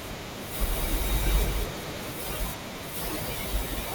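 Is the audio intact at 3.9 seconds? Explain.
Yes, at 3.9 seconds the audio is intact, with no dropout, click, distortion or other fault at that moment.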